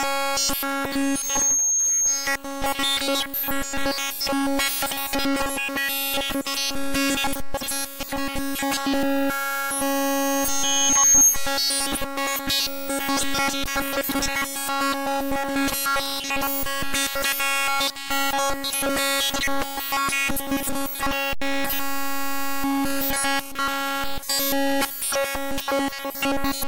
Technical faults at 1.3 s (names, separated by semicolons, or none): loudspeaker feedback squeal